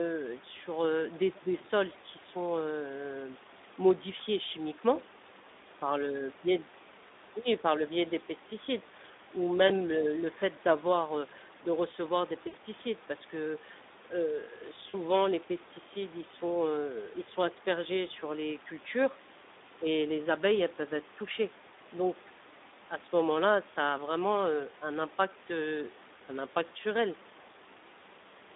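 Speex codec damage runs through the whole speech clip: a hoarse, noisy, narrowband sound confined to roughly 250 Hz to 3.7 kHz, which fits a low setting around 11 kbps. Then there's VoIP packet loss concealed by the speech codec at 4.17, 9.67, 12.47 and 14.89 s. Each time the decoder stretches its last frame into a brief tone or noise that fades, longest at 12.47 s, about 60 ms.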